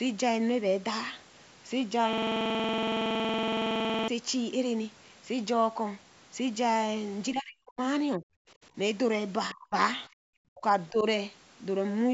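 From 2.13 to 4.08 s a system hang loop repeats one 46 ms piece over and over. That fits a 2048-sample buffer. It sounds like a steady buzz at about 21.5 Hz.

Next comes speech suppressed in double talk, at 7.33 to 7.80 s, 8.17 to 8.24 s, 9.54 to 9.74 s, 10.52 to 10.63 s and 10.90 to 11.05 s. The speech dips or cuts out, by up to about 40 dB. The likely cause is an echo canceller ducking during overlapping talk.

From 10.09 to 10.24 s the background is gated by the echo canceller. The room sound drops by about 39 dB, then returns.

From 10.89 to 11.03 s the other side's voice leaks through, about 20 dB below the speech. It is likely residual loudspeaker echo the canceller missed.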